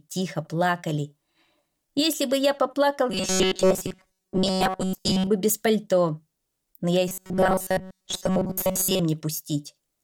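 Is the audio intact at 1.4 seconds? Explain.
Yes, the audio is intact at 1.4 seconds, with no dropout, click, distortion or other fault at that moment.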